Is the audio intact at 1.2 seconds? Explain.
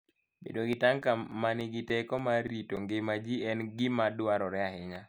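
No, 1.2 s sits inside a run of CD scratch ticks from 0.44 to 3.35 s, ending just before "en gima". Once per disc turn a scratch wipes out more than error correction can rebuild, so the player patches or mutes it, leaving about eleven brief ticks, each only a few milliseconds.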